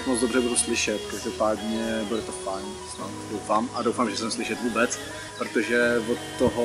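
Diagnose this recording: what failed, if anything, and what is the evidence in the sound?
Nothing failed; no fault is audible anywhere.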